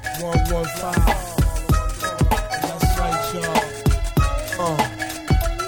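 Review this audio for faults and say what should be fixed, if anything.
No technical faults can be heard anywhere in the audio, so there is nothing here that needs to be fixed.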